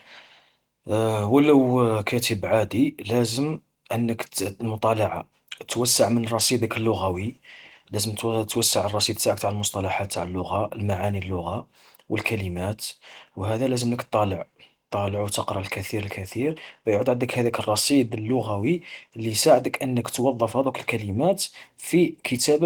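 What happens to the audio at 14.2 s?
Nothing goes wrong at 14.2 s: the speech there comes through intact, with only the light, fullband character of the Opus voice coding heard throughout.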